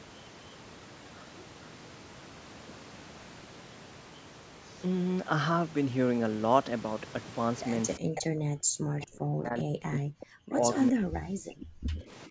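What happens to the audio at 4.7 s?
Nothing goes wrong at 4.7 s: the speech continues intact through that moment, with only the room's background noise sitting about 17 dB below it.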